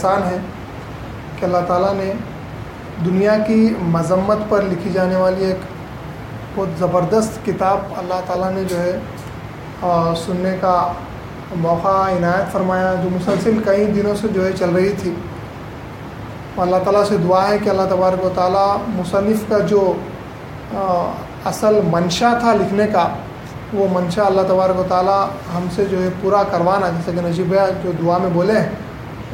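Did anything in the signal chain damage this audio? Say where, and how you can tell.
No, nothing in the chain audibly damages this audio; I hear no event at any point that would implicate a stage.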